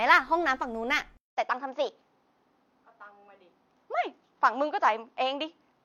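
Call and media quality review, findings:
Input switched to a poorer device, 1.17 s to end. 200 ms silence at the switch, then speech band-limited with nothing above 6.7 kHz, duller tone, faint new background noise. Level roughly unchanged. Likely capture moved to a narrower-band microphone or headset call profile.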